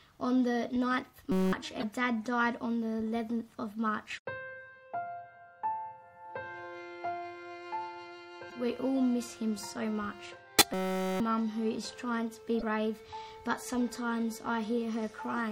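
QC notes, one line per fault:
Throughout, MP3 compression: the sound turns watery and swirly, with chirpy metallic edges on bright sounds and smeared attacks. This is likely a low-bitrate encode, consistent with about 64 kbps, where the encoder zeroes weak frequency lines that flicker frame to frame.
1.32–1.53 s and 10.74–11.20 s, system hang loop: the same 5.33 ms scrap of audio repeats exactly, giving a steady buzz at 188 Hz. That fits a 256-sample ring buffer replaying while the system froze. About 0.2 s and then half a second of sound are lost.
4.14–4.19 s and 10.57–10.62 s, damaged data in a compressed stream: each is a brief glitch of about 50 ms. The decoder hits corrupted frames, loses sync and skips ahead to the next valid frame header.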